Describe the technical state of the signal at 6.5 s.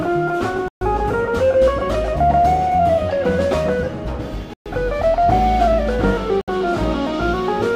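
Around 6.5 s the sound has just come back from a Bluetooth stall that silenced it from 6.41 to 6.48 s, a gap of 66 ms. The audio drops abruptly to nothing and then resumes, likely because radio interference held up packets until the headphones' buffer emptied and playback had to wait for resent data. On a waveform this appears as a flat, near-silent line with hard edges. A spectrogram shows a narrow blank vertical band across all frequencies.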